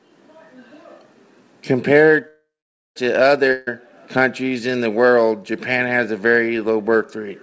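From 2.28 to 2.98 s the speech stops and a fading buzz or hiss continues the last sound, then about 0.49 s of silence follows before the speech resumes intact, roughly 0.68 s later than it should. This is a call audio freeze, likely caused by delayed packets emptying the jitter buffer.

At 3.52 to 3.69 s a burst of packet loss removes about 140 ms of speech. The receiver holds the last sound as a fading buzz or hiss across the gap, then picks up further along, so that stretch of speech is gone. Audio above 8 kHz is absent throughout, which points to a wideband call codec such as G.722.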